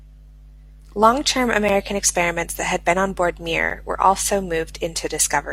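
At 1.69 s, just before "experiments that had been", a gap between stream segments breaks in. It recurs at 3.70 s, after "had been on board". Segment timestamps fail to meet, two seconds apart. Each hole is about 7 ms of hard-edged silence.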